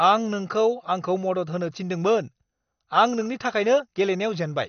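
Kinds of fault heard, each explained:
MP2 compression: The speech sounds dull and muffled from start to end, with nothing above about 6.5 kHz, and a gurgling, granular roughness clings to the voice as upper detail flickers in and out. The likely cause is MPEG Layer II coding at a low bitrate, in the region of 48 kbps. With so few bits spread across its 32 sub-bands, the encoder switches off the upper bands and quantises the remaining ones coarsely.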